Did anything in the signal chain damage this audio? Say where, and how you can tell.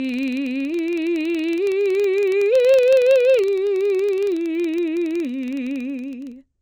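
Yes. Throughout the music there is a rhythmic buzz at about 21.5 Hz, a rapid train of ticks whose strength rises and falls with the level of the music. That is a filter restarted on every block, a fault in the block-based processing stage. The filter discards its memory at each block boundary and starts again from silence, so every block opens with a small transient. The tick rate fits a 2048-sample block. Mains hum would hold a steady level, and dropouts would leave gaps, but these ticks scale with the music and never interrupt it.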